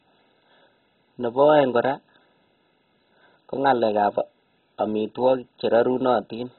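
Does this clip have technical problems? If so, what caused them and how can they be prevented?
Yes. Throughout the speech there is heavy damage consistent with MP2 compression. Nothing survives above 4 kHz, so the sound is dull. The remaining bands flicker in and out and carry a gurgling, granular roughness. That points to an MPEG Layer II encoder running at a very low rate, which fits about 16 kbps, likely starving its upper sub-bands and coarsely quantising the rest. A simple low-pass filter would sound dull but clean, without the unstable, bubbling texture. To prevent it, encode speech at a much higher bitrate or with a more efficient modern codec.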